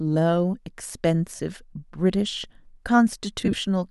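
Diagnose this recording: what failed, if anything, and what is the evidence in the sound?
Lost LE Audio frames on the Bluetooth link. At 1.36–1.40 s the speech briefly blurs into noise for 30 ms, which fits four 7.5 ms frames. From 3.41 to 3.58 s, 82.5 ms of gaps are scattered over 165 ms, in runs up to about 20 ms. The decoder masks each gap with the last spectrum under random signs.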